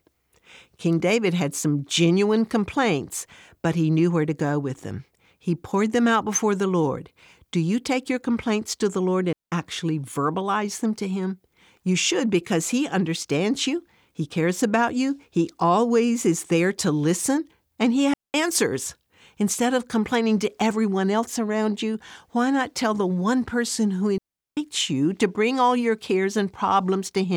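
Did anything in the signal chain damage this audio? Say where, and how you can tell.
Yes. The digital wireless link between the microphone and receiver lost too much data three times, and the receiver muted in a digital wireless dropout each time. There are clean holes of near silence from 9.33 to 9.52 s (about 194 ms, just before "actually verbalize them to"), from 18.14 to 18.34 s (about 204 ms), and from 24.18 to 24.57 s (about 393 ms, between "the one person who" and "you to bring all"). Each drop has a very short fade and no noise burst on either side.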